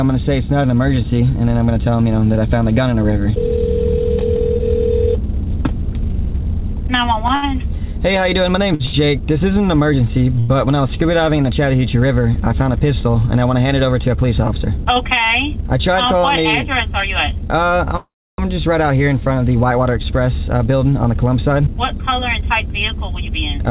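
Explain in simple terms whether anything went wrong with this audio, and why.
Several network-timing problems show up in this call audio, which travels through a phone-quality codec that carries nothing above 4 kHz.

Short stalls from a late packet occur at 7.35, 8.74, 8.86 and 10.40 s. Each time a packet arrived late, so the receiver held the last sound for 53 to 86 ms until it came, giving a brief drawn-out moment with a slight buzz or dip.

A call audio freeze runs from 17.97 to 18.41 s. The sound is stretched into a fading tail and then goes silent for about 0.3 s before resuming where it stopped. The likely cause is packets being held up in transit until the buffer emptied.

Jitter buffer speed-up occurs from 13.65 to 14.61 s (8% faster) and from 21.12 s to the end (10% faster). With too much audio queued, the receiver trimmed tiny slices to catch up, about a tenth and a third of a second respectively. 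The pitch stays the same, but the sound feels hurried.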